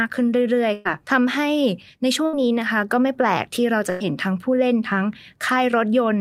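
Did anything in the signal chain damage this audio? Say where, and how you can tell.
Yes. Bursts of packet loss at 0.73 to 1.00 s, 2.26 to 2.43 s and 3.90 to 4.02 s, at the network stage: each time the receiver stretches and fades the last sound, then resumes with 80 to 120 ms of speech gone.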